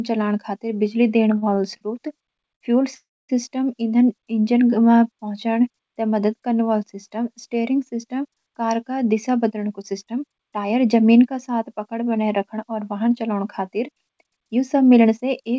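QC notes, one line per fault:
1.38–1.83 s, repeated stalls (stutter): Four short holds, the longest 41 ms, fill about a quarter of this span. Late packets starved the jitter buffer, so the sound drags.
2.55–2.63 s, short stall from a late packet: One sound is held 58 ms too long. The receiver stretched it until the delayed packet arrived. Nothing is lost.
2.95–3.31 s, call audio freeze: The sound stops and is filled for 341 ms, mostly silence. Packets held up in transit likely emptied the buffer before playback resumed.
9.05–10.65 s and 14.25–15.51 s, jitter buffer speed-up: Playback runs at 109% and then 107% at unchanged pitch. Trimming small pitch-period slices to cut the built-up delay makes it sound hurried.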